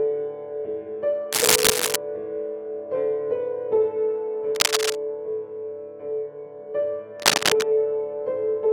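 Scratchy, rustling bursts break over the music at 1.32–1.96 s, 4.55–4.96 s and 7.20–7.63 s, about 5 dB louder than the music in the first and last and roughly as loud as it in the second; this cable scratch noise likely comes from a worn cable or connector flexing.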